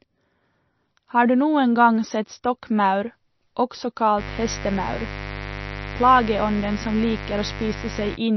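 From the start, the speech has plainly audible watery, swirling artefacts and nothing above 5.9 kHz, likely MP3 compression at around 32 kbps; a spectrogram shows a flat ceiling and flickering high-band patches.

From 4.16 to 8.18 s a steady raspy mains buzz sits about 10 dB below the speech, showing as evenly spaced 50 Hz harmonic lines stretching up through several kilohertz.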